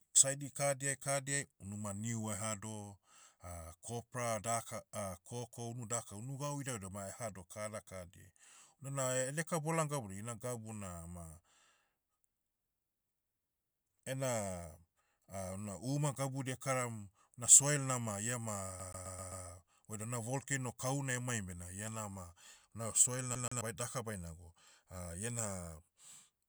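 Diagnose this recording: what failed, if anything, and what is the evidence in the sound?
Playback failed: a CD stuck on one turn. From 18.79 to 19.45 s, just before "oidam na volcano kahuna", one 131 ms slice of speech repeats five times, muted at each jump. At 23.35 to 23.61 s it repeats twice. A scratch keeps throwing the laser back one track.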